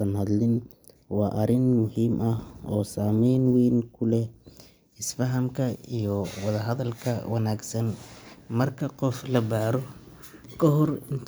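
No technical faults can be heard anywhere in the recording; the speech signal stays continuous and steady throughout.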